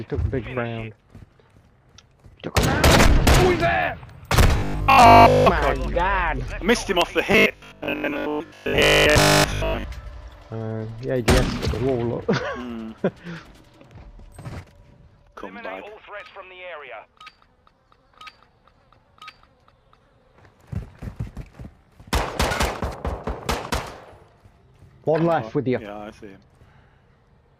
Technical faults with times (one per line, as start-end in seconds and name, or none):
4.58-5.46 robotic sound from repeated short buffers
7.32-9.84 robotic sound from repeated short buffers